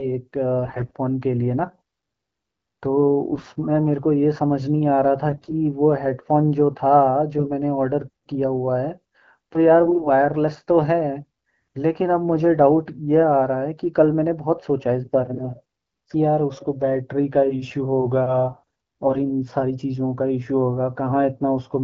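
AMR bit errors strike at 0.65–0.92 s, 3.32–3.50 s, 5.29–5.54 s, 7.38–7.51 s, 9.86–10.10 s and 19.06–19.20 s. Flipped low-protection bits misplace excitation pulses and skew fine pitch, gain and spectral values, so the wideband speech keeps its pitch and level but turns briefly hoarse, scratchy and gargly.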